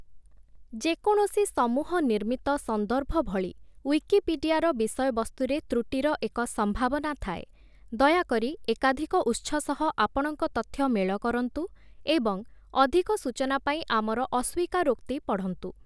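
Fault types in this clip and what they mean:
No technical faults can be heard anywhere in this speech clip. Nothing in the audio calls for a fault entry here.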